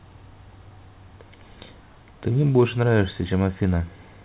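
No technical faults occur at any point in this speech, which comes through a G.711 call path that carries nothing above 4 kHz.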